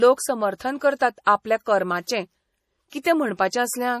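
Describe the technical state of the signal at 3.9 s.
At 3.9 s, as throughout, the speech carries plainly audible watery, swirly artefacts, likely MP3 compression at a low bitrate around 40 kbps. A spectrogram shows a hard ceiling near 15.1 kHz and flickering, patchy high bands.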